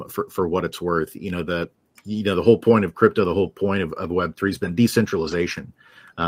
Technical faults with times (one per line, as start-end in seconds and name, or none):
1.61-1.63 lost packet rebuilt from error correction
4.47-4.49 lost packet rebuilt from error correction
5.27-5.33 lost packet rebuilt from error correction